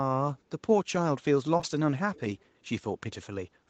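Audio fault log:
1.57 to 1.65 s, short concealed packet loss: two back-to-back gaps of about 20 ms each, which fits two consecutive lost packets. The receiver covered each one by extending the preceding sound for roughly 17 ms before blending back into the real signal, so the moment comes across as a brief smear or wobble. On a spectrogram, the harmonics or noise pattern stretch flat across about 34 ms.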